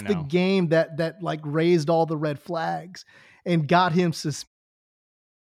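Nothing stood out on listening to this speech recording, and the smooth fade-out near the end sounds like an ordinary editor's fade.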